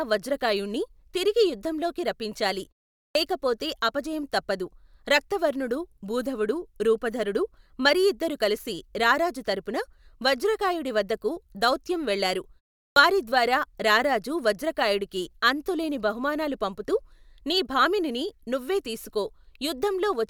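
At 3.08 s, after "వజ్రకాయుణ్ణి తిరిగి యుద్ధంలోకి రప్పించాలి" and a 0.44 s pause, and at 12.89 s, after "వజ్రకాయుడి వద్దకు దౌత్యం వెళ్ళారు" and a 0.37 s pause, there is a clipped start after a pause. Each time, the output device has dozed off in the silence and loses 72 ms while waking. As a result, "లేకపోతే అపజయం తప్పదు రక్తవర్ణుడు" and "వారిద్వారా రారాజు వజ్రకాయుడికి అంతులేని" burst in abruptly, missing their first sounds. This differs from muted pauses, which only drop the background: here actual speech is swallowed.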